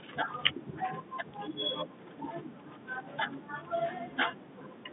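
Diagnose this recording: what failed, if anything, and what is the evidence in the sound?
Nothing here has failed: the speech is simply carried over G.711 telephone coding, so you get the usual phone-line band of about 150 Hz to 3.7 kHz with nothing above about 3.8 kHz, and that is just how a landline call sounds.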